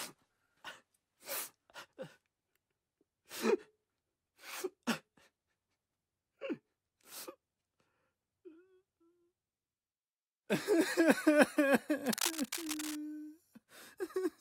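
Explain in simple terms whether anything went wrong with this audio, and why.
From about 12.06 to 12.97 seconds, a rough scratching, rustling burst sits on top of the sound, nearly as loud as the sound itself. This is cable scratch noise, likely from a worn cable or connector being moved, so its contact flickered unevenly.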